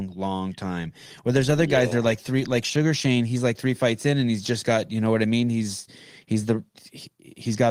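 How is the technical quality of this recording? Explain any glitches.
The recording has no glitches or technical faults. Its Opus voice compression can be heard only as a light coding texture over the speech, with the upper frequencies kept rather than cut off, which fits a fullband hybrid mode at a moderate bitrate.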